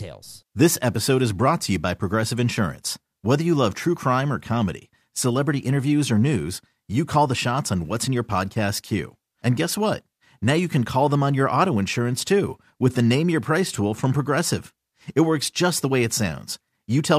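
No technical faults can be heard anywhere in the speech recording.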